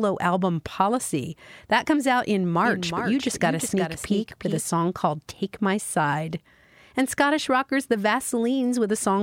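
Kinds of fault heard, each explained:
Doubled audio track: the speech was likely captured twice via a slower path, so a copy about 5 dB quieter trails about 0.4 s behind, cutting in and out abruptly.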